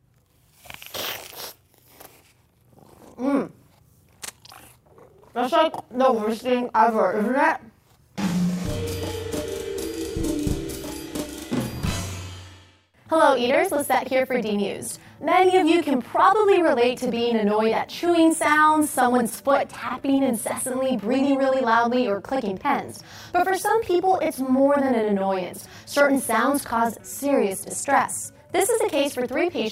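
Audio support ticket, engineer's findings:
Channel delay (doubling) throughout: whole clip heard twice, second copy 40 ms late at equal level, thickened slap-like doubling. Probable component: stereo-to-mono fold-down. One channel buffered late before summing, so both copies remain audible.

Scattered short gaps, 19.29–20.20 s: about seven brief ticks and smears, none longer than roughly 15 ms, around 70 ms patched in total. Probable component: network receive path. Lost or late packets concealed by extending the preceding sound.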